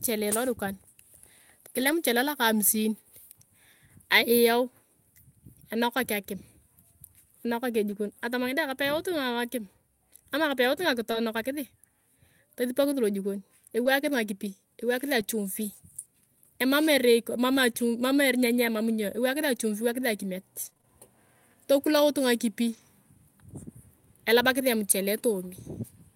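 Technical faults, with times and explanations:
1.79–1.93 s, 7.91–7.93 s, 11.13–11.15 s, 13.85–13.87 s and 15.19–15.21 s, lost packet rebuilt from error correction: each of these is audio that went missing and came back from the low-bitrate backup copy carried in the next packet, so nothing drops out. The first one covers 80 ms, which fits a run of four 20 ms packets, and the rest are single 20 ms frames. Those stretches sound a bit grainier and noisier than the audio around them.
11.11–11.15 s and 13.83–13.87 s, short concealed packet loss: in each spot about 20 ms never arrived in time, and the decoder bridged it by carrying the preceding sound forward, using its pitch if it was voiced or shaped noise if it wasn't. It then crossfaded back into the real signal. The backup copy covers the tail of each hole, but the front is guessed, so you hear a quick smear or little wobble right there.
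20.65–22.79 s, scattered short gaps: across this couple of seconds there's a handful of separate dropouts, around four, none longer than roughly 20 ms. Together they amount to about 80 ms missing, most of which came back from the backup copies, and the remainder was patched by extending the previous sound. The result is a few tiny ticks or hiccups spread through the passage, with only a small slice of it actually filled in.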